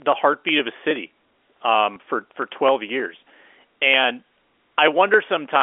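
Speech clip with a single packet loss with last packet repeated, from 1.94 to 1.96 s. The 20 ms gap points to one lost packet, which the receiver filled by playing the previous packet again. That single repeat sounds like a small blip. On the waveform the same 20 ms stretch appears twice in a row. The line, carried as G.711 A-law at 64 kbps, shows energy only between about 300 Hz and 3.5 kHz.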